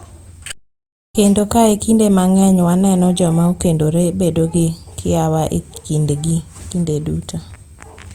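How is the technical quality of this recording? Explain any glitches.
The recording has one clear glitch: an audio dropout to silence from 0.52 to 1.15 s. The speech cuts off abruptly and about 0.62 s of dead, digital silence follows, with no room tone or background at all, before the speech resumes mid-flow. Whatever was said in that gap is simply missing. The likely cause is a momentary loss of the input signal, such as a brief disconnection or mute, while the recorder kept writing zeros.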